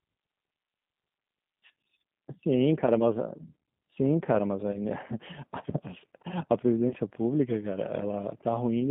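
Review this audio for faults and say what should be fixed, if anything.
The speech runs through a G.729 codec, which is consistent with G.729A at 8 kbit/s. It rebuilds each 10 ms frame from a vocal tract filter, a pitch predictor and a few pulses, so the sound is plainly rough and synthetic, confined to about 150 Hz to 3.6 kHz. A wideband codec such as G.722 or Opus would prevent this.

VoIP packet loss concealed by the speech codec occurs at 4.72–4.78 s and 6.89–6.94 s. Each gap fits a single lost 20 ms packet. The decoder extrapolates its last pitch and filter, giving a brief stretched smear that stays weak for tens of milliseconds afterwards. A jitter buffer with forward error correction or redundant packets would prevent this.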